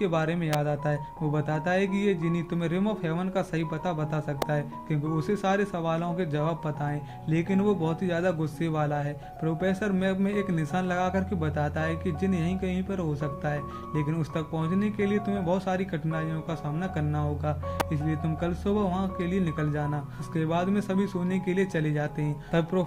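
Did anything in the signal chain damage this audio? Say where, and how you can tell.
Yes: electrical switching spikes at 0.53, 4.42 and 17.8 s, snaps near -10 dBFS, likely arcs picked up by the analogue wiring. They appear as thin broadband spectrogram lines and waveform needles.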